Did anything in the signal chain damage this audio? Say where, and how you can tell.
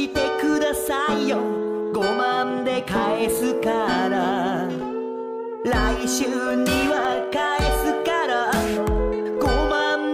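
Yes. CD scratch ticks appear between 6.51 and 7.05 s, three regular ticks, the longest under a millisecond. This is a playback fault: a disc blemish defeats error correction once per revolution, so the player interpolates or mutes the damaged samples.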